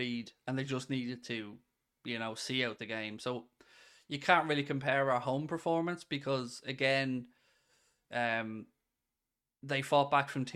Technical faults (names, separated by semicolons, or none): none